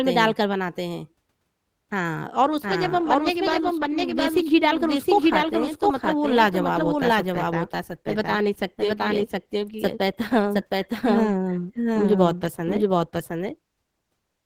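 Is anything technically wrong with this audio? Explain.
Yes, two faults are audible.

A doubled audio track runs throughout. A second full-band copy trails roughly 0.7 s behind at about equal level, with no decay or room colour, likely from a second, slower capture path.

An adaptive stream drops to a lower bitrate from 2.42 s to the end. The connection slowed, and codec artefacts rise abruptly with no gap. The change fits a fall from around 64 to 16 kbit/s.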